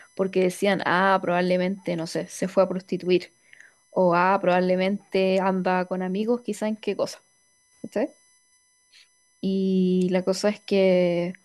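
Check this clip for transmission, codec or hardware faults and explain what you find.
A faint, fixed-pitch whine runs under the speech for the whole clip, sitting roughly 40 dB below it, with a 1 kHz fundamental and its loudest component up at the 6 kHz harmonic. This is USB whine. The bus draws current in 1 ms frames, and that repeating load leaks into the audio through the shared power or ground, producing a steady tone at 1 kHz and a series of its multiples.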